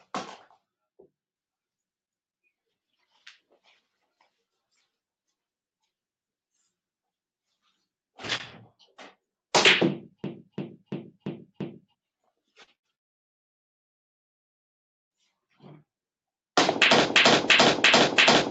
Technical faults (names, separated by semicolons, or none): short concealed packet loss; burst of packet loss; long network dropout; system hang loop